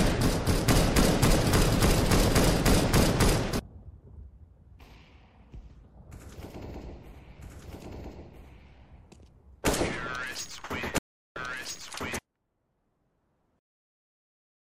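From 6.83 s to 12.19 s the audio carries a doubled audio track: a second full-band copy running about a second and a half behind, at roughly the same level. Unlike an echo or reverb, it has no decay or room colour and cuts in and out abruptly, most likely a slower capture path or an edit stacking two out-of-step copies. At 10.98 s a playback stall silences the output for about 375 ms until 11.36 s. The sound stops in mid-flow, which points to the player likely running out of data or having its thread blocked.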